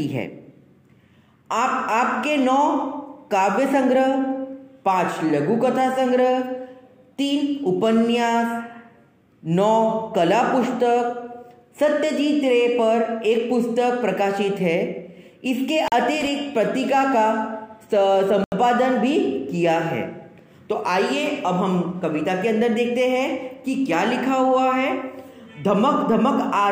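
At 15.88 s the sound drops into a block of digital silence lasting 40 ms, ending at 15.92 s. The sound there is simply silence, which fits an output buffer that was not filled in time. There is no fade in or out, and the whole event comes across as a short hole. At 18.44 s a second block of digital silence appears, this time 80 ms long, running to 18.52 s. Being twice as long, it sounds like a short, clear dropout.

Between the two gaps, from 16.21 s to 16.28 s, there is loose connector crackle. A worn or dirty contact is making and breaking rapidly, chopping the signal for about 64 ms. The result is a brief, irregular burst of scratchy crackle. It is rough and uneven, unlike the clean, hard edges of the silent blocks.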